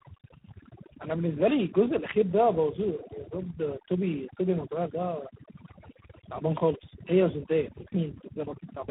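Speech runs the full clip with two faults present throughout. Overdone noise removal pushes the background down, leaving twinkling specks where individual frequency bands flicker on and off, and the same gating strips quieter parts of the voice. Tandem speech coding adds roughness, muffling and a warbly quality. The sound points to two speech coders in sequence, a low-rate coder like G.729A followed later by G.726 at around 24 kbit/s, with each re-encoding the previous one's errors. Nothing is present above 3.8 kHz.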